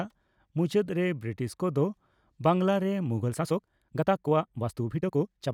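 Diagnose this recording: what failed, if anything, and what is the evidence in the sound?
A time-stretched section runs from 3.18 s to the end of the speech clip: the pace jumps to about 1.65 times normal while the pitch holds, giving a rushed sound. The likely cause is software time-compression that drops short segments to shorten the passage.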